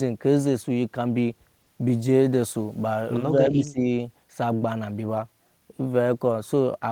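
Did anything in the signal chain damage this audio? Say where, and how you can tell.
Yes: speech suppressed in double talk at 3.49–3.84 s, a roughly 15 dB dip in call processing, likely from an echo canceller misjudging simultaneous talk as echo.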